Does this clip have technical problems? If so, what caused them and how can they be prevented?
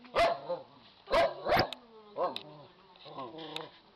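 Yes. DAB burbling runs from 1.35 to 1.63 s, a burbling disturbance over the sound. Weak reception let bit errors, at roughly a third of a percent, slip past the error correction into the MP2 audio stream. Corrupted samples then put short noise blips into single sub-bands, across a stretch that fits a dozen or more frames. Preventing it means improving reception with a better-placed or higher-gain antenna, or taking the feed from a wired or IP source instead of off-air.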